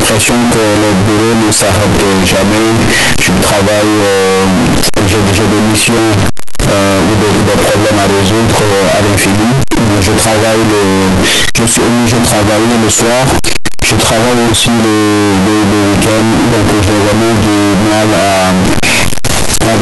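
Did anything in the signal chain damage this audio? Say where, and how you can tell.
Yes, at the sample-format conversion stage. For the whole clip the speech is extremely loud and harsh, with the waveform flattened into a near-square shape at an almost fixed, high level, and the background noise comes up to the same level as the speech, while the pitch contour can still be followed. This is the float read as integer fault, likely 32-bit float samples interpreted as 32-bit integers, so each sample's sign and exponent bits dominate its value regardless of the original level.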